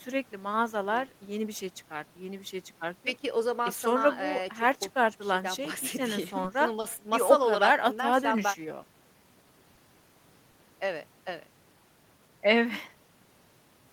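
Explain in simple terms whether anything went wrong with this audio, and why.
Two kinds of short hiccups from the network show up in this speech. The first is short concealed packet loss, at 6.80 to 7.00 s and again at 10.51 to 10.55 s. Each time about 20 ms of audio never arrived, so the receiver papered over the hole by carrying the last sound forward. You hear a tiny smear or wobble there, and a quick consonant can get swallowed.

The other is a short stall from a late packet, at 9.75 to 9.79 s. Nothing was lost. A packet just turned up late, so the receiver stretched the previous sound by 20 ms while it waited, then picked up where it left off. It comes across as a sound held a touch too long.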